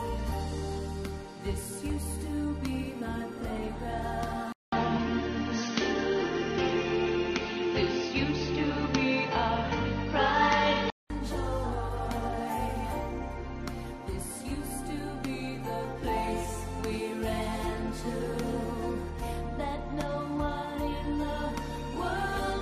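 At 4.52 s the sound drops out for about 200 ms, then returns dull and boxy, with nothing above 6.4 kHz, a level shift of around 5 dB and new background noise roughly 35 dB under the signal. The likely cause is the input switched to a poorer device, a narrower-band microphone or headset profile. On a spectrogram the upper band goes dark with a flat ceiling at 6.4 kHz. The waveform shows a brief gap at the switch and a changed envelope until full bandwidth returns at 11.1 s.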